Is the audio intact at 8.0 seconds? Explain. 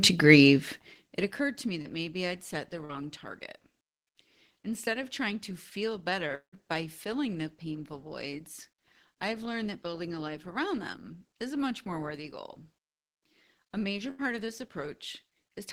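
Yes, the speech at 8.0 seconds is intact, with no audible fault at that moment.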